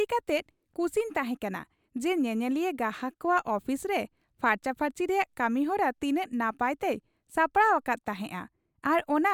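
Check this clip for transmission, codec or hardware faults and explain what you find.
No technical fault can be heard anywhere in the recording, and the speech signal stays continuous and intact throughout.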